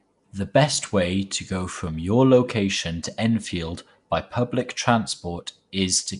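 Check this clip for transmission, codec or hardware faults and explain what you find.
One codec fault runs through the whole speech clip. Nellymoser compression, throughout: fixed-rate block coding, likely Nellymoser Asao at around 44 kbps, leaves nothing above 10.6 kHz and a plainly audible rough, hissy, smeared halo.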